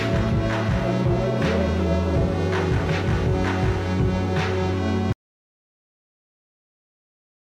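Music plays normally until 5.13 s, when it cuts out abruptly into complete silence that runs to the end of the clip, with no room tone or decay remaining. This is an audio dropout to silence, likely from the input signal being lost while recording continued writing silence.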